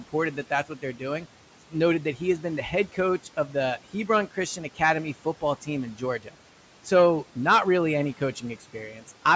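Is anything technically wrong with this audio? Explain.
Yes, the noise suppressor is cutting into the speech, in stretches at 0.13–1.26 s, 1.71–3.55 s, 3.93–4.8 s, 5.25–6.36 s and 8.17–9.09 s, the last right after "not really any". It mistakes quieter parts of the speech for background noise, pulling down a fraction of a second in each stretch by about 10 to 12 dB, so those bits sound swallowed and faint.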